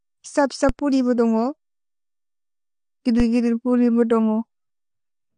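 Throughout, nothing sounds above 9.6 kHz, and the speech is dull and smeared, with a warbling, fizzy texture on sibilants and held sounds. This is likely AAC compression at a low bitrate, consistent with roughly 32 kbps, where the coder cuts bandwidth and coarsely quantises spectral lines.

At 0.69 s and again at 3.20 s, a DC step produces a low thump as the waveform's zero line jumps. The speech itself continues unchanged. Each offset then decays away, behaving as though a 20 Hz high-pass filter follows the step.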